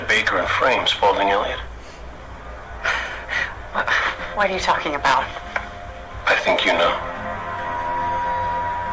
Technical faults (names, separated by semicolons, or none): none